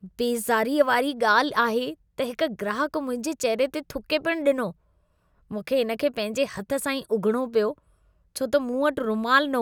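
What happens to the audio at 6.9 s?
Nothing goes wrong at 6.9 s; the speech carries on intact through that moment, with no dropout, click or distortion to be heard.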